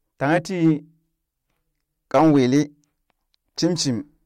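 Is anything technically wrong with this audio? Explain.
Yes. Hard clipping from 0.24 to 0.71 s and 2.14 to 2.61 s: speech overdriven about 3 dB, then 5 dB, flattens peaks, adding harsh crackling distortion.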